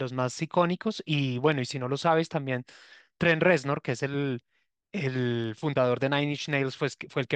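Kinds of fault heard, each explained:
Clock slip clicks: A faint, steady ticking runs under the speech from about 0.21 s to 7.28 s, roughly ten ticks a second, some seventy in all. Each tick is a single-sample jump in the waveform. The even spacing likely comes from two devices running on unsynchronised clocks about 200 parts per million apart, so the drift adds up to a whole sample about every 0.1 s and one sample is dropped or repeated.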